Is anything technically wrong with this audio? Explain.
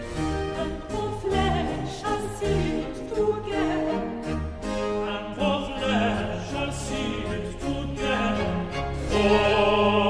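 No, there's nothing technically wrong here that a listener would pick up on.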